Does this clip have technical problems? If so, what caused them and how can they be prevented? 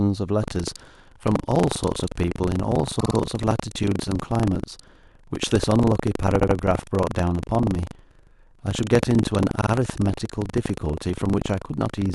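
Yes. From 0.4 s to the end, the speech carries a steady robotic rattle at 25 Hz that is present only while sound is playing. This is buffer tearing. The writing program and the playback hardware have drifted out of step and cross inside each 40 ms period. About a tenth of every period therefore plays audio from roughly 70 ms earlier, with hard joins on both sides. Keeping the writer's position locked to the hardware read pointer, with enough headroom that the two never overlap, prevents it.

There are three short stutters. At 2.99–3.15 s a 52 ms stretch plays three extra times, adding 157 ms. At 6.39–6.55 s a 78 ms stretch repeats twice, also adding 157 ms. At 9.60–9.71 s a 52 ms stretch repeats twice, adding 104 ms. These are repeated frames: short runs of compressed frames, each likely two or three long, were written or sent again, so the decoder played them again. Deduplicating frames by sequence number or timestamp before decoding prevents it.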